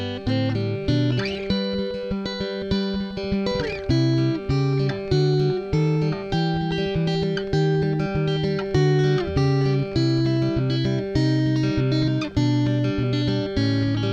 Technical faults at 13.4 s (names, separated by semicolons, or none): clock slip clicks